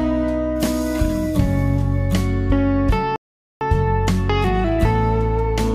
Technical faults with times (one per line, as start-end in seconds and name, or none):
3.16-3.61 rebuffering stall